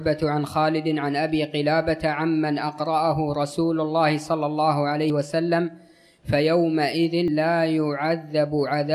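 At 5.1 s and again at 7.28 s the sound jumps ahead, losing roughly 70 ms each time with no gap. That's likely a dropped buffer (overrun), where samples weren't collected before being overwritten, so the two sides join directly.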